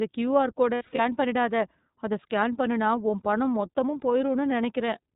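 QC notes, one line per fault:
Throughout: iLBC codec. The speech is band-limited, with nothing above 4 kHz, and sounds slightly rough and synthetic, with plainly audible coding damage. Each frame's excitation is coded independently, which fits iLBC's 13.33 kbps mode with 30 ms frames.
0.75 to 1.00 s: lost iLBC frames. Short held, buzzy vowel-like patches replace the speech, totalling 150 ms over about 240 ms, the longest about 70 ms. The decoder repeats the last pitch cycle mixed with noise, and because iLBC frames stand alone, clean speech returns immediately. This fits about five lost frames.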